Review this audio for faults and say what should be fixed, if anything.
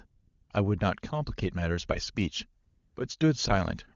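AMR comfort noise appears twice, from 0.05 to 0.49 s (440 ms) and from 2.65 to 2.95 s (300 ms). Each time, the phone judged the talker silent and stopped sending speech frames. The receiver then filled the gap with synthetic noise built from a coarse estimate of the background's level and spectral shape, replacing the real room sound. On a spectrogram, these stretches show as smooth, featureless noise with hard vertical edges where the fill switches in and out. On a waveform, they show as a flat, even, low-level envelope. The AMR-WB wideband coding around them, consistent with its highest rate, adds at most faint coding colour. To prevent this, disable discontinuous transmission or retune the voice activity detector's threshold and hangover so that quiet passages are still sent as real speech frames.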